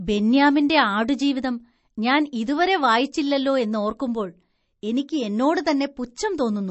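From start to finish the speech has a hard ceiling at 8 kHz, with nothing above it, and plainly audible codec damage: a watery, swirling texture, metallic chirps on s sounds, and smeared onsets. This is likely MP3 compression at a low bitrate, which fits something near 36 kbps. Starved of bits, the encoder cuts the treble at a fixed point and drops weak frequency lines that flicker on and off between frames.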